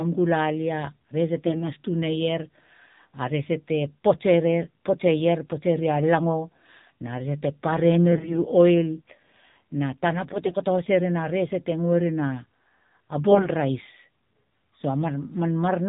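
The speech is boxy and buzzy from start to finish, with nothing above 4 kHz and a thin, synthetic edge on every syllable. That is the AMR narrowband mobile codec at work. The audio was squeezed to 8 kHz sampling and rebuilt from a pulse-driven vocal-tract model. The degree of damage fits a low AMR-NB mode around 7.4 kbps, where too few pulses per subframe leave the voice plainly coarsened.

Four short stretches turn hoarse, scratchy and gargly while pitch and loudness hold roughly steady: 1.46 to 1.69 s, 8.12 to 8.39 s, 10.34 to 10.58 s, and 13.32 to 13.48 s, the last sounding rougher than the others. These are AMR bit errors. On a weak link, unprotected bits in consecutive 20 ms frames arrived flipped, at around a few percent and roughly double that in the final burst. The excitation pulses landed in wrong positions and the fine gain and spectral values drifted.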